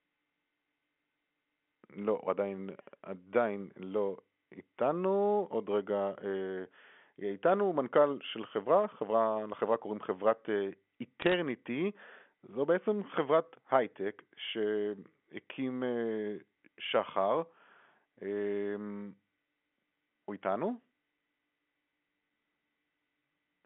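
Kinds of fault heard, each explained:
Bit errors on a digital phone line: a short burst of sharp ticks and crackle from 11.22 to 11.34 s over unchanged speech in the narrow telephone band, where a small fraction of flipped bits each corrupts one logarithmically coded sample, throwing it to a wrong value.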